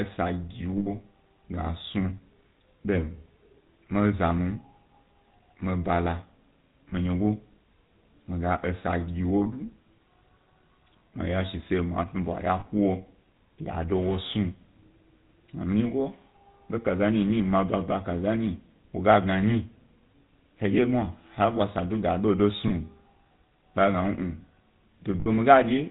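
Speech runs the whole way with a buzzy, gravelly roughness and nothing above 4 kHz, which fits the 13 kbps GSM full-rate codec. It models the vocal tract and drives it with sparse, regularly spaced pulses, so the fine excitation detail that makes a voice smooth is lost. Short rough, metallic rings briefly replace the speech at 0.78–0.88 s, 6.90–6.94 s, 9.44–9.47 s, 12.60–12.67 s, 22.68–22.72 s and 25.20–25.28 s. These are lost GSM frames: each gap is covered by repeating the last good frame's settings, and the longest hold is around 80 ms at 0.78 s.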